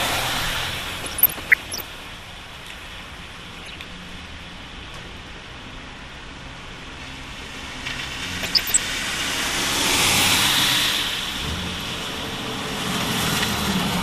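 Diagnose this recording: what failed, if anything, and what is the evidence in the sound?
Codec stage: MP2 compression runs through the whole recording. The sound is dull, with upper bands flickering in and out and a granular, gurgling texture on what remains, the signature of a sub-band coder starving its upper bands of bits. The damage is plainly audible and steady, which is likely the result of a low Layer II bitrate in the region of 80 kbps. It differs from the burbling below because it never comes and goes.

Transmission stage: DAB burbling appears in three bursts, at 1.00 to 1.83 s, 3.56 to 3.79 s and 8.43 to 8.79 s. Each burst brings short blips of noise as individual sub-bands are corrupted. This fits residual bit errors of around half a percent getting past the error correction into the audio frames and corrupting samples and scale factors. Unlike the steady codec dullness, it is bursty and sits on top of it.

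Storage or editing stage: a doubled audio track runs from 7.54 to 11.52 s. A full-band copy trails the original by roughly 150 ms at about 5 dB lower, and it starts and stops abruptly. It has no decay tail and no room colour, which separates it from an acoustic echo or reverb. The cause is likely a second capture through a slower path, or an edit that left two offset copies.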